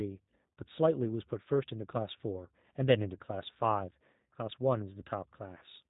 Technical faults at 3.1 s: G.729 codec

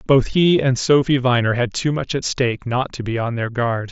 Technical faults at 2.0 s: none

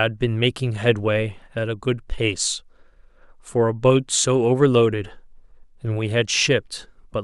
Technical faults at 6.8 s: none

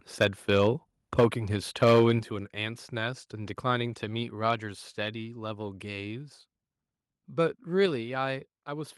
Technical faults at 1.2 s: microphone overload; microphone volume stepped down

